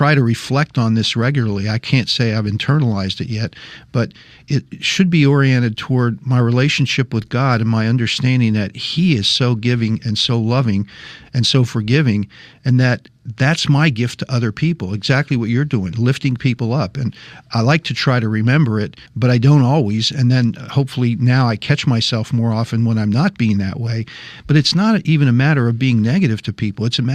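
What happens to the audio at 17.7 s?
At 17.7 s the speech continues without interruption, and no fault can be heard at that point.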